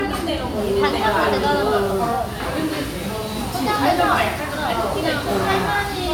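Sounds, with no technical faults detected anywhere in the recording.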